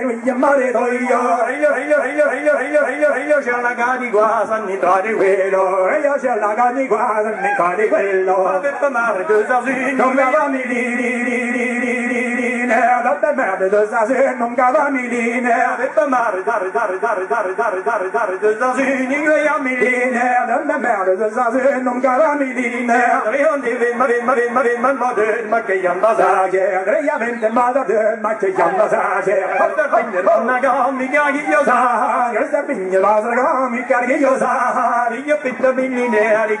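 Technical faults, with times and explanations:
1.7–3.4 s, 10.9–12.6 s, 16.5–18.4 s and 24.0–24.9 s, repeated frames: the same 0.28 s chunk loops six, six, seven, then three extra times. That fits a block of about six compressed frames being sent again, so you get a stutter.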